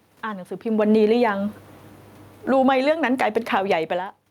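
Automatic gain control in this speech recording keeps correcting its level. From 0.64 s to the end, automatic gain falling sets in: the control judges the input too loud or its background noise too strong and steadily pulls its gain down, so the voice and the room noise behind it sink together rather than the voice alone fading. Automatic gain rising interrupts this twice. From 1.13 to 1.63 s the gain climbs by about 6 dB, and from 2.8 to 4.1 s it climbs by about 5 dB after the input drops by about 19 dB. Each time, speech and background swell upward in step. The talker's own shifts in distance from the microphone, near half a second and again near 4 s, come on top of these gain movements.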